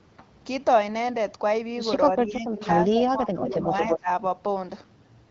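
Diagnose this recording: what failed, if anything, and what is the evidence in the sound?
Speech suppressed in double talk, 2.09 to 2.69 s and 2.87 to 4.09 s, in the call processing stage. The speech level sinks by as much as about 20 dB in both stretches, likely because an echo canceller mistook simultaneous talk for echo and attenuated everything it could not separate.

Echo leak, 3.44 to 3.99 s, also in call processing. A copy of the speech trails the original by 225 ms at only about 5 dB below it. This is likely a loudspeaker endpoint whose canceller left part of its microphone pickup in the return path, over a band-limited wideband channel that stops near 7.2 kHz.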